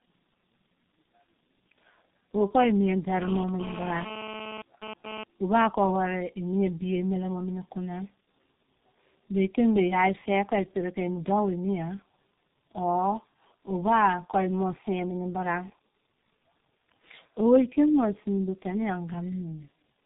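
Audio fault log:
Throughout: tandem speech coding. The speech sounds rough, muffled and warbly, with nothing above 3.8 kHz. This points to two low-rate speech codecs in a row, likely AMR-NB then G.723.1, where the second coder re-encodes audio the first had already degraded.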